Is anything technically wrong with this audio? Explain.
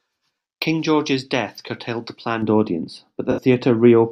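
Yes, there are two faults, both in the second half of the speech clip.

From about 2.42 s, just after "death curtailed the", and running to the end, the sound turns dull and muffled, as if a blanket had dropped over it. This is de-emphasis applied wrongly: a treble-cut filter meant to reverse pre-emphasis was applied to audio that never had any, or was applied twice. The result is a smooth downward tilt, with 10 kHz sitting about 11 dB below 1 kHz.

Between 3.31 and 3.41 s there is a brief smeared, noisy patch lasting roughly a tenth of a second. This is AAC frame loss with concealment. About 64 ms of coded audio went missing, which fits a few lost frames. The decoder covered the gap by reusing the last good spectrum with scrambled or interpolated content, so the gap comes out as a hazy blur.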